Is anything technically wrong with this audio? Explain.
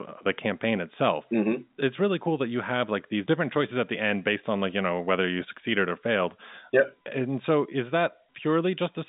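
No, nothing's wrong here; the speech comes over an ordinary G.711 telephone line, so it naturally stops at about 3.8 kHz, and that's just how phone audio is meant to sound.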